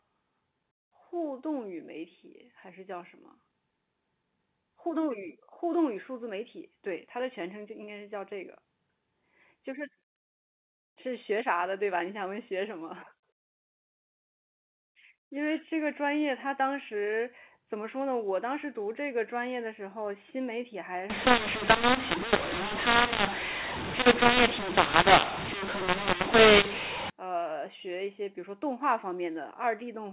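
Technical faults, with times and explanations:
21.10–27.10 s, mu-law and A-law mixed up: mu-law telephone samples are decoded as A-law, scrambling levels and lifting the quietest samples well above silence, so speech turns harsh and pauses hiss; the waveform's gaps fill in, and the spectrogram shows broadband hash below 4 kHz.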